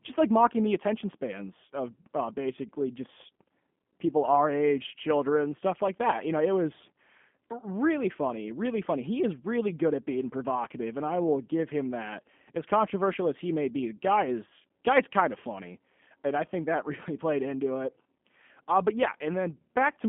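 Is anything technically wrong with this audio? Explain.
Yes. Throughout the speech, the signal has passed through a G.729 codec, most likely the G.729A variant at 8 kbit/s. The encoder keeps only a vocal-tract filter, a pitch predictor and a few pulses per frame, rebuilding the speech from those parameters. The line band runs from about 150 Hz to 3.4 kHz, so the speech sounds thin and boxed-in, and the coding damage is plainly audible as a rough, slightly synthetic buzz.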